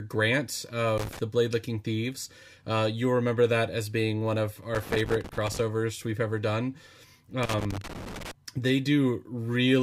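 Irregular bursts of scratchy crackle break into the speech from 0.98 to 1.19 s, 4.75 to 5.59 s and 7.43 to 8.31 s. This is loose connector crackle: a worn or dirty contact repeatedly breaks and remakes the signal path, chopping the audio.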